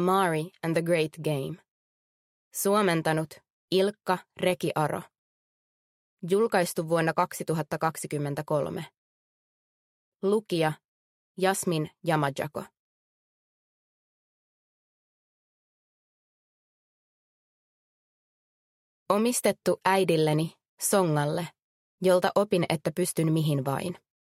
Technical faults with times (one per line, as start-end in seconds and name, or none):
none